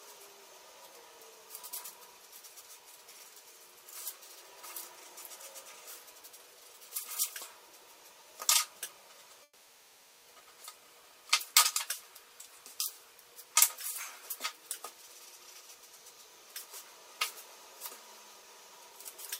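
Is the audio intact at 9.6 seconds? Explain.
No, 9.6 s falls inside a long network dropout from 9.43 to 10.27 s. Packets likely stopped arriving, so the receiver stretched the last sound into a fading buzz before brief silence, and about 0.82 s is lost.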